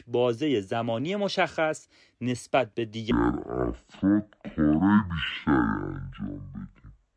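From 3.11 s to the end, a wrong sample rate halves the speed and drops pitch an octave, which fits 44.1 kHz audio played at 22 kHz. Spectrogram harmonics sit at half height, stretched in time.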